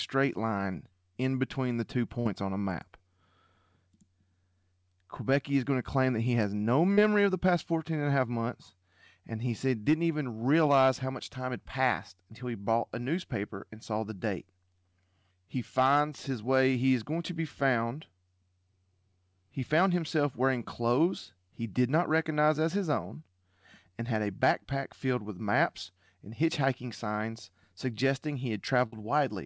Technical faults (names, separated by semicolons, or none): burst of packet loss; short concealed packet loss